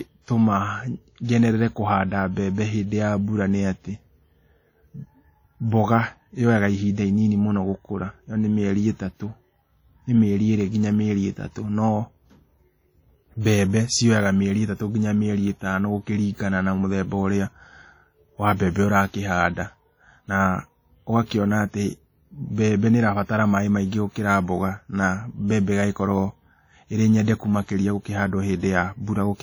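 Throughout the speech, heavy transform-codec damage rings and smears, with hiss breathing alongside the signal; likely WMA compression, consistent with a low bitrate near 32 kbps.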